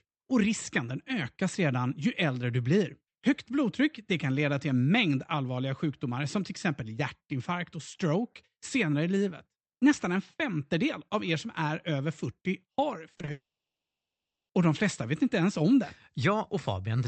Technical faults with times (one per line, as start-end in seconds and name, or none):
13.13-13.29 repeated packet loss (robotic sound)
13.31-14.51 long network dropout